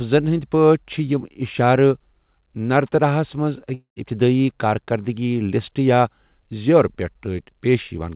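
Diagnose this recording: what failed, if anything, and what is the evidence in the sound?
Just after "نرتراہَس منٛز", from 3.74 to 4.04 s, the speech turns into a fading buzz, then brief silence. This is likely a long network dropout, with the receiver stretching the last sound over the missing audio.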